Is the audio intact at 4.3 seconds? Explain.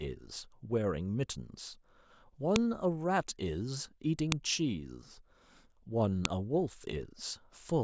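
No. A file header played as audio occurs at 4.32 s, where a new piece of the speech was joined on with its header still in place. Those few dozen bytes of file data play back as samples, producing a sharp, loud click.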